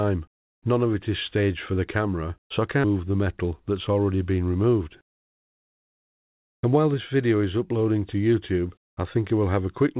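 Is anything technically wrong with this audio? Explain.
Yes. From 4.81 to 6.89 s there is a jitter buffer speed-up: after a backlog built up, the receiver trimmed short pitch-period slices, removing roughly 150 ms, so the sound runs about 6% faster and feels hurried. The pitch stays unchanged, which separates it from a sample-rate mismatch. Throughout, nothing is heard above 4 kHz, consistent with a G.711 mu-law call codec.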